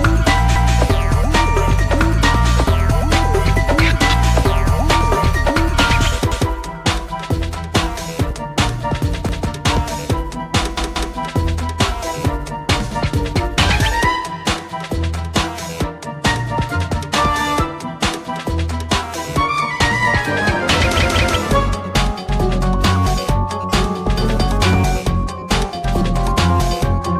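At 0.56, 6.32 and 9.29 s, a roughly 0.19 s piece of sound plays twice; at 10.77 to 11.15 s and 20.99 to 21.36 s it plays three times. This is a repeated buffer: fresh audio arrived late, so the device replayed its last block, and the length fits an 8192-sample buffer. Unlike a dropout, there is no silence and nothing missing, just identical copies with a hard join at each repeat, heard as a stutter.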